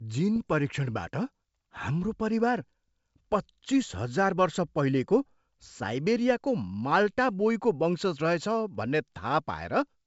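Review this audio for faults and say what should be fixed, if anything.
Bit errors on an ADPCM link are audible from 0.36 to 0.48 s as a cluster of pops and rough, gritty bursts with brief jumps in level. Each flipped bit corrupts the decoder's adaptive step size and predictor, so the damage rings on for several milliseconds. The roughly 120 ms span points to a handful of damaged frames at a low error rate, on the order of a tenth of a percent. The G.722 wideband coding at 64 kbit/s carrying the speech is clear around the burst. Add error detection and concealment on the link, or improve the radio path, so corrupted frames are muted or replaced instead of decoded.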